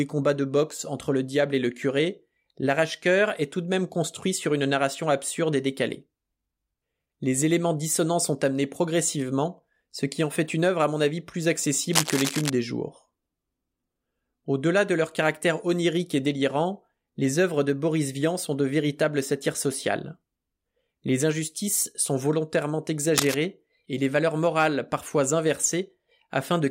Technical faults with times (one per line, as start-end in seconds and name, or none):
11.92-12.50 cable scratch noise
23.16-23.36 cable scratch noise